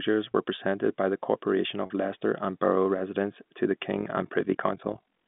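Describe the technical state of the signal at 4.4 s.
Overlap-add ripple runs from 3.92 s, after "residents to the", to the end. Badly overlapped frames pump the level about 11 dB, roughly 40 times a second, causing fast flutter.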